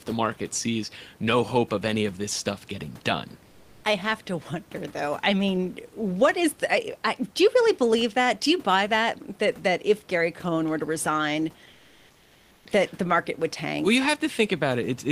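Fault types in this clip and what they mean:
Comfort noise in place of the background: the sending side likely stopped transmitting during speech pauses through discontinuous transmission, as Opus DTX does, and the receiver filled each gap with synthetic noise. From 3.47 to 3.83 s, after "this stuff getting done", and from 11.71 to 12.63 s, after "were to resign", the real room noise, about 31 dB below the speech, gives way to a flat, featureless hiss about 1 and 2 dB quieter respectively.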